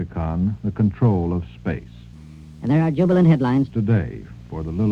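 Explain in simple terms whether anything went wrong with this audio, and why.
A section at the wrong speed runs from 2.13 to 3.70 seconds. In that stretch the sound plays about 1.32 times faster than it should, so it rushes along and jumps up in pitch by roughly five semitones, then snaps back to normal. Speed and pitch move together because the same samples are simply being read out too quickly. The likely cause is an editor or player running that part against the wrong clock.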